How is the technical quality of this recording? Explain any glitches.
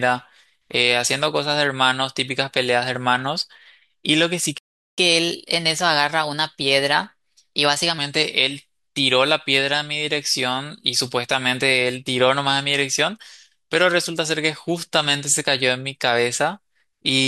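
The recording has two linked playback glitches. At 4.58 s the speech cuts to silence for about 0.39 s, until 4.98 s. This is a playback stall, likely the player running out of buffered data. From 4.98 s to 7.98 s there is catch-up at higher speed: the player resamples its backlog at 1.1 times normal rate to recover the lost time, so the speech sounds hurried and about a semitone and a half higher before returning to normal.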